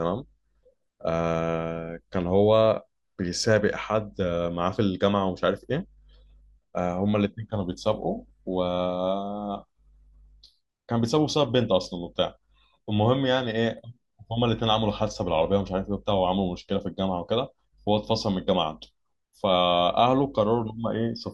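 No technical faults can be heard anywhere in the speech recording. There are no events to place in time.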